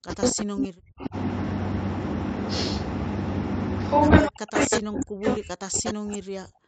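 From 0 to 1.16 s the speech dips and breaks up, sinking very deep for about a second in total. This is likely speech suppressed in double talk: with both sides talking, the echo canceller turned this talker down along with the loudspeaker echo. Between 0.09 and 0.27 s a faint delayed copy, about 20 dB below the speech and lagging by 256 ms, is likely an echo leak that the canceller failed to remove. From 4.26 s to the end, the same deep suppression returns. Within it, echo leaks at 4.55 to 4.81 s and 5.85 to 5.94 s repeat the audio 304 ms late, the first nearly as loud as the speech and the second clearly quieter.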